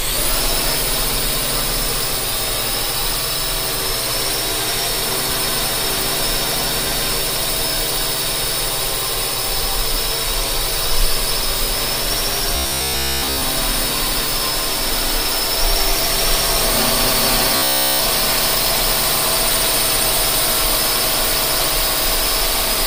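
A rigid, metallic buzz pitched at 66.8 Hz appears in this recording of sounds from 12.56 to 13.43 s, with most of that stretch replaced, and again from 17.56 to 18.00 s, where it is entirely buzz. This is robotic sound from repeated short buffers, likely caused by audio arriving too slowly so that the playback looped a fragment of about 15 ms, skipping the real sound and imposing that fixed buzz.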